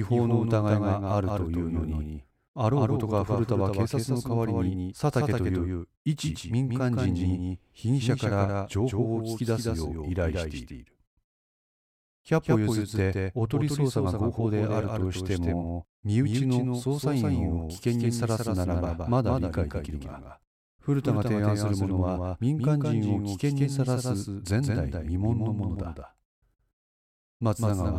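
A doubled audio track runs through the whole recording. Every sound arrives twice: a second full-band copy trails the original by about 150 ms and sits roughly 5 dB quieter, so each syllable gets a hard, slapback-like repeat with no reverberant tail or room colouring. The copy likely comes from the speech being captured a second time through a slower path and mixed back in, leaving the two tracks permanently out of step.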